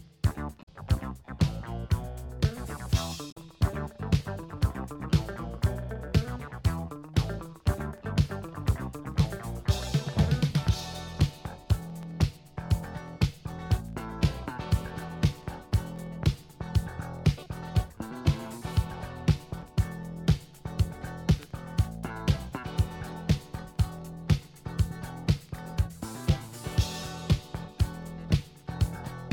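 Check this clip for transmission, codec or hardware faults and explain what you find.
Two codec faults show up early, both damaged data in a compressed stream: short glitches around 0.59–0.69 s and 3.28–3.37 s, where corrupted frames throw the decoder off sync until it finds the next header.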